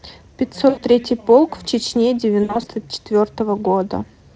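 At 0.69 to 0.81 s, about 80 ms of audio drops into VoIP packet loss concealed by the speech codec: the Speex decoder extrapolates its last pitch and filter, giving a buzzy tone or coloured noise that fades, which fits four lost 20 ms frames. From 2.43 to 2.70 s, 140 ms of losses scatter across 240 ms, with runs up to 60 ms. The spectrogram shows smeared harmonic striping and the waveform a decaying envelope.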